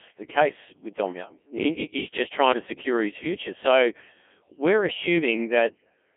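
From start to finish the speech sounds robotic and buzzy, squeezed into a narrow band of about 200 Hz to 3.5 kHz with nothing above 3.8 kHz, and the heavy damage suggests a very low rate, around 1.6 kbit/s. This is the Codec 2 vocoder at work: rather than keeping the waveform, it transmits only pitch, voicing, energy and a rough spectral envelope, and the decoder rebuilds the voice from sine waves.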